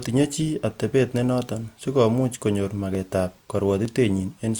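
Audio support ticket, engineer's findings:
Two sharp single clicks in the speech at 2.95 s and 3.85 s. Dropped samples likely: about 0.7 ms missing each time, so the waveform steps abruptly to a later value. Spectrogram shows a thin full-height vertical line at each time.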